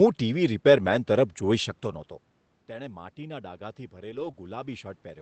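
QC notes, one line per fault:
0.85 s and 4.11 to 4.29 s, lost packet rebuilt from error correction: there's no gap either time, but both spots go a bit rough and grainy. At 0.85 s it's a single 20 ms stretch. Around 4.1 s it's longer, about 100 ms, which fits five separate 20 ms Opus packets. Each lost packet was filled from the low-bitrate backup copy carried in the next one, so the decoder had something to play. That copy is coarser than the real frame, hence the noisier texture.
2.67 s to the end, automatic gain rising: the input level drops by about 19 dB here, and the gain control reacts by slowly turning itself up over the rest of the clip. It's a gradual climb rather than a jump, so you hear the voice and the room noise swell together. The gain can't tell the voice from the room noise, so it lifts both.
4.31 to 4.35 s, short concealed packet loss: right after the rebuilt stretch, about 20 ms never arrived in time. 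This one had no backup copy, so the receiver invented roughly 15 ms by carrying the last sound forward and then blending back into the real audio. It comes across as a tiny smear. The earlier level change near 1.5 s is just the talker moving, and it's not part of this.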